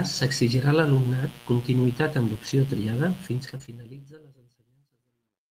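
A steady 60 Hz mains buzz, around 25 dB below the speech, runs through the whole recording. Switching spikes twice per cycle let harmonics climb into the kilohertz range, so it sounds raspy rather than like a smooth hum, which marks interference from a dimmer, rectifier or missing shield.

At 2.45 to 2.51 s comes a lost packet rebuilt from error correction. About 40 ms, which fits two 20 ms packets, was played from the low-bitrate copies carried in the following packets. There is no gap, only a brief rougher, noisier patch.

Starting at 3.20 s, truncation distortion sets in on a fade. The fade stage keeps only about 12 bits with no dither, so the waveform collapses into coarse steps. From 4.31 s to the end at 5.50 s the tail grows gritty. Because this is tied to falling level, it is distinct from the network faults.

A denser network burst follows. Error-correction rebuilds cover 3.45 to 3.55 s (60 ms, three packets) and 3.62 to 3.64 s (one packet, 20 ms). 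Between and after them, short concealed packet losses fall at 3.57 to 3.62 s and 3.66 to 3.69 s, each about 20 ms that never arrived. The decoder extended the preceding sound and blended back, giving a brief smear or wobble. Unlike the rebuilt frames, these are guesses, so detail can vanish outright rather than just roughen.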